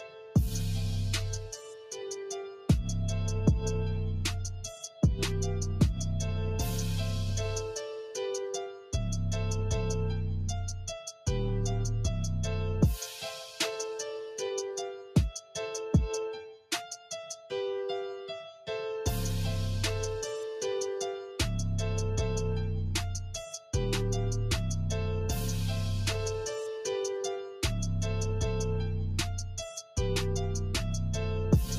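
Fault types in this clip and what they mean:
Noise suppressor applied to music or sounds: Throughout the clip the level keeps swelling and sinking by around 5 dB. Held tones and decaying tails thin out and flutter while sharp onsets come through nearly intact. A suppressor built for speech has been left running on material that isn't speech. It treats steady, sustained energy and ambience as background noise and keeps turning it down, so the sound pumps instead of sitting at an even level.
Sound cut by the noise suppressor: At 0.0–0.35 s, 1.4–2.25 s, 2.45–2.69 s, 8.7–8.93 s, 14.96–15.16 s and 16.43–16.71 s the sound dips sharply, by about 9 to 12 dB at the deepest. Each dip lasts a fraction of a second, and the longest runs close to 0.7 s. Here the suppressor mistook these passages for noise and pulled them down harder than the surrounding material, hollowing out sustained parts and cutting decays short.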